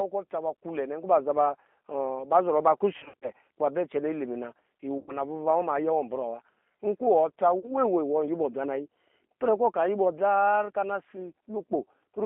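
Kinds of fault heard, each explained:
G.729 codec: The whole clip sounds rough and slightly synthetic, confined to about 200 Hz to 3.5 kHz, which fits an 8 kbit/s model-based speech codec.
VoIP packet loss concealed by the speech codec: Around 2.98, 4.98 and 7.59 s, the decoder fills gaps by stretching the last sound into a fading buzz or coloured noise, worst near 3.0 to 3.3 s.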